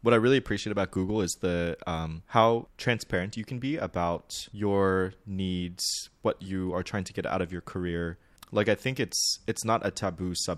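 No technical faults are audible anywhere in the speech.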